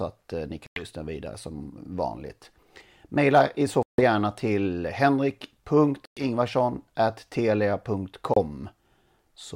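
The speech drops to silence four times, at 0.66–0.84, 3.83–4.01, 6.05–6.25 and 8.34–8.39 s, then resumes further along as if it had kept playing. That's likely a Bluetooth dropout: packets reached the headphones too late and were discarded.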